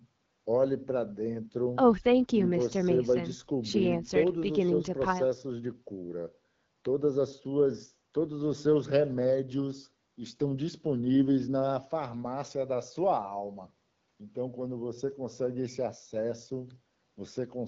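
No technical faults are audible.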